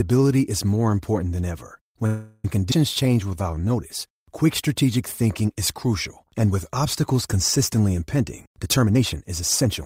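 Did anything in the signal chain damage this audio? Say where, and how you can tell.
Yes, and it all comes from the network and jitter-buffer end of a call.

Right after "more important than ever", from 2.06 to 2.45 s, the sound stalls and the last bit gets stretched into a fading buzz or hiss for about 377 ms. There's no silence in there. When it resumes it carries on exactly where it left off, with nothing lost. That's a call audio freeze, likely packets held up in transit so the buffer ran dry and the receiver padded the hole, pushing everything later by that amount.

At 2.71 s there's the opposite: a skip ahead. Playback jumps forward with just a few milliseconds of fill, and roughly a tenth of a second of audio simply isn't there. The two sides butt together almost directly. That's the buffer or the network dropping a chunk while later audio was already queued, which also claws back about 100 ms of the delay the freeze added.

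From 3.03 to 3.68 s the speech drags while the pitch stays put. It runs at 84% speed and gains about 112 ms in total. This is jitter buffer slow-down: the receiver repeats single pitch periods over and over to rebuild its reserve. That's why sounds in that stretch feel drawn out instead of dropping in pitch like a slowed tape.

After "and with obstacles consistently", from 8.14 to 9.82 s, it goes the other way, running at 115% speed with the pitch unchanged. It sounds rushed. That's jitter buffer speed-up: the buffer was holding more than its target, so it trimmed out small pitch-period slices many times in a row, shedding roughly 0.3 s to bring the latency back down.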